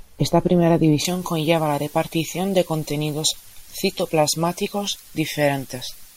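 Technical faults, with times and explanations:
1.05–6.16 s: pre-emphasis left on. From 1.05 s to the end, the treble is lifted by about 11 dB at 10 kHz relative to 1 kHz, a tilt that fits the J.17 emphasis curve. The speech was given a high-frequency boost meant to be undone by a matching cut on playback, but that de-emphasis never happened. The upper range is therefore too strong, so the speech turns thin, bright and hard-edged, with exaggerated sibilance.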